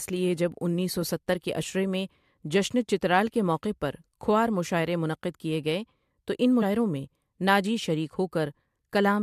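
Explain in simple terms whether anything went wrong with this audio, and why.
At 6.61 s the speech is broken by a tiny chirp or blip. This is damaged data in a compressed stream: part of the compressed file was corrupted, so the decoder misread that spot and had to find its place again.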